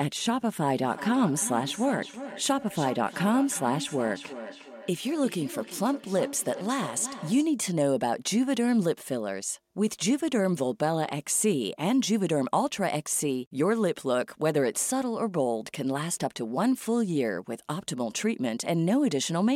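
From 0.82 s to 7.6 s the speech carries a feedback echo between two devices. A second device in the same room is on the call, replaying this talker's signal through its loudspeaker, and the microphone picks that playback up again. The local echo canceller only removes its own device's output, so the returned copy passes through. Each phrase recurs at roughly 0.4 s intervals, thin and ringing, peaking at about 13 dB below the speech.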